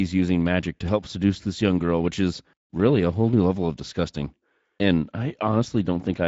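From start to finish, the speech has passed through the Speex codec at a rate that sounds like roughly 17 kbps. This CELP coder models the vocal tract and spends only a limited bit budget on the excitation signal that drives it. That thin excitation is plainly audible here. The speech sounds noisy and somewhat hoarse, with a grainy texture rather than a clean, natural tone.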